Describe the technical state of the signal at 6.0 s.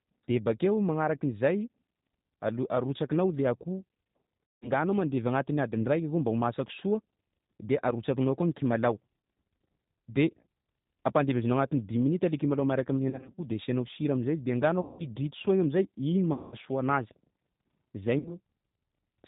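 At 6.0 s, as throughout, the speech carries G.729 codec damage: rebuilt from a vocal-tract filter, pitch predictor and sparse pulses at what sounds like 8 kbit/s, it is band-limited below 4 kHz, rough and synthetic.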